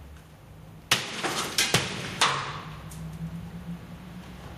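Gain pumping runs throughout: the gain swings by around 15 dB, pulled down under each loud sound, likely from excessive gain and a fast limiter, unlike a gate's abrupt silences.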